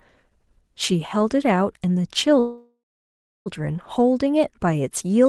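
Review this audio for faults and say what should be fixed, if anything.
Call audio freeze, 2.39 to 3.48 s: the sound fades into 650 ms of silence, then resumes where it stopped, likely because delayed packets emptied the jitter buffer. A steadier network path or a jitter buffer with more headroom would keep packets arriving before the buffer runs dry.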